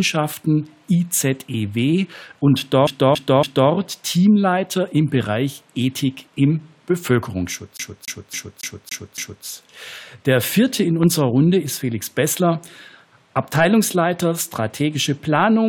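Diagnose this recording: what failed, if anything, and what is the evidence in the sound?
Playback stage, CD stuck on one turn: a 0.28 s segment repeats three times from 2.87 to 3.71 s and six times from 7.77 to 9.45 s, with a short mute at each jump. The identical loop length in both places marks a scratch that sends the laser back one track on every turn, unlike an irregular buffer underrun.

Analogue stage, loud pop: a single sharp pop from 11.03 to 11.05 s, roughly 10 dB above the surrounding level, while the sound continues underneath. This is unlike a dropout, where the signal would disappear. It was likely caused by a voltage step from a plug, switch or static discharge.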